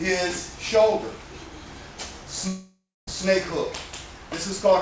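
From 2.48 to 3.10 s, likely a long network dropout: the last sound stretches into a fading buzz, then goes silent for 0.26 s, and 0.6 s of audio is lost.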